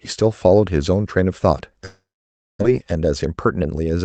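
From 1.85 s to 2.63 s the sound stops flowing. It first smears into a buzzy, fading continuation of what came just before, then sinks into about 570 ms of near-silence. It picks up again with roughly 600 ms of material simply gone. That pattern points to a long network dropout, likely packets failing to arrive while the receiver improvised a fill, and the stream comes back running around 150 ms later than before.

Right after, from 2.71 s to 3.85 s, there's a jitter buffer speed-up. The receiver had more audio stacked up than it wanted, so it trimmed tiny pitch-period-sized slices over and over to catch up, shaving off about 150 ms in total. The speech plays about 111% fast but keeps its pitch, so it comes across as rushed rather than chipmunky. All of it rides on a call path whose band stops at 8 kHz.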